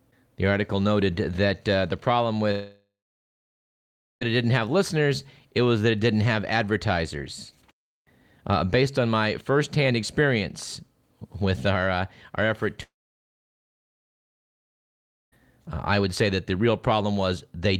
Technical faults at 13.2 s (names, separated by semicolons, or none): long network dropout